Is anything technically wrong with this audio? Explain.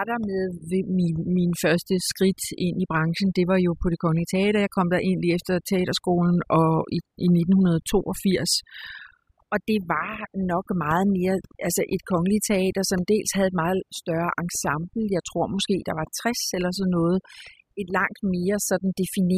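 Yes. Overdone noise removal runs throughout the clip. The noise reduction acts too strongly, pushing individual frequency bands down or out whenever they sit near its noise estimate, taking quiet parts of the speech with them. The background falls away and breaks into twinkling, warbling specks.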